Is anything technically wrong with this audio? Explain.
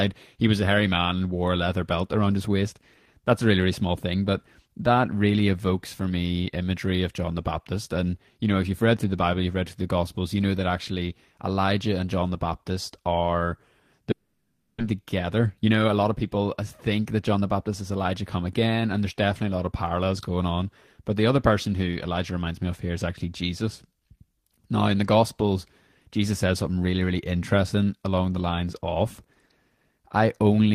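Yes, two faults sit back to back in this speech clip.

From 14.11 to 14.82 s the sound smears into a buzzy, fading continuation with no silence, and about 0.4 s of speech never returns. This is likely a long network dropout, with the receiver stretching the last audio it had to fill the gap.

From 14.92 to 18.05 s, just before "come again and there's", speech runs about 8% fast at unchanged pitch and sounds hurried. This is a jitter buffer speed-up: after the stall added roughly a third of a second of delay, the receiver trimmed short pitch-period slices to catch up.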